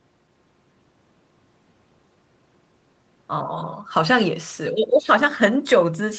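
No technical faults can be heard anywhere in this speech. The sound comes through a working call path, with nothing above about 8 kHz and the usual coding texture of a call codec such as Opus.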